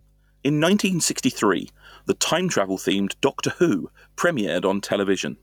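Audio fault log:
throughout mains hum: a steady 50 Hz tone with low harmonics, roughly 25 dB below the speech, fixed in pitch, unlike broadband rumble or wind.
throughout gain pumping: the gain swings roughly 10 dB, pulling loud and soft parts closer in level and squashing the sound, likely excessive gain hitting a fast limiter; the level moves, unlike hum.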